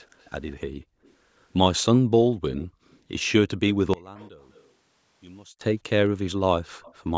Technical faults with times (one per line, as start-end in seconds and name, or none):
0.22-0.27 echo leak
1.04-1.13 echo leak
2.58-2.67 echo leak
3.93-5.61 one channel inverted
4.15-4.69 echo leak
6.82-6.94 echo leak